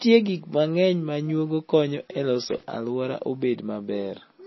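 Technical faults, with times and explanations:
Throughout, MP3 compression: the speech sounds dull and watery, with nothing above about 5.8 kHz and weak detail flickering in and out between frames. That's likely an encoder starved of bits, which fits a very low bitrate around 24 kbps.
2.41 to 2.63 s, loose connector crackle: a short, irregular burst of scratchy crackle. That's what a worn or dirty contact does when it keeps making and breaking, chopping the signal.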